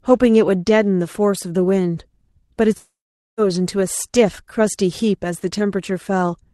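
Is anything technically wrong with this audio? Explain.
Yes, there's a long network dropout from about 2.77 to 3.40 s. The speech turns into a fading buzz, then near-silence for about 0.45 s of that stretch, and resumes with some speech gone, likely from lost packets concealed by the receiver.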